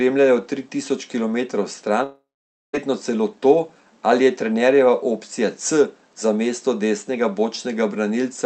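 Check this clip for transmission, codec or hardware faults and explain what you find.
There's one clear fault: a long network dropout from 2.03 to 2.75 s, right after "tri tisoč kilometrov". Packets most likely stopped arriving for about 0.7 s. The receiver stretched the last bit of sound into a fading buzz, and the last half second or so is near-silence. Speech picks up again at "celo to", with the missing stretch simply gone. The call codec's band-limited character, consistent with Opus at around 32 kbps topping out near 8 kHz, runs through the whole clip.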